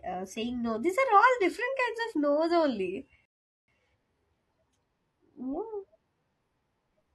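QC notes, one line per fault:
3.25–3.68 s, rebuffering stall: right after "of no's only" the speech drops to silence for about 0.43 s, then picks up exactly where it stopped. The player exhausted its downloaded buffer and waited for more data, so nothing is skipped, but the pause adds time.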